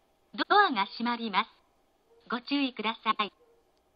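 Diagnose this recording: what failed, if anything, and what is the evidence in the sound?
Network fault: frames out of order at 0.33–0.51 s and 3.11–3.29 s. Two adjacent 85.3 ms blocks play swapped. Garbled flutter.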